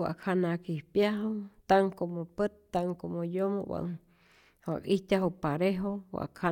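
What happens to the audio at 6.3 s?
Nothing goes wrong at 6.3 s; the speech carries on cleanly through that moment with no dropout, click, distortion or other fault.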